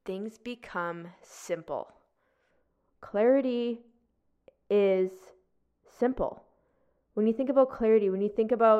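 From 2.51 s to the end, the speech turns dull and muffled because de-emphasis was applied wrongly: a treble-cut stage meant to reverse pre-emphasis acted on audio that never had it, or was applied a second time. The response slides down gradually, reaching about 11 dB below the 1 kHz level by 10 kHz. Unlike a low-pass filter, there is no sharp cutoff; sibilants and consonant detail soften progressively rather than disappearing above one frequency.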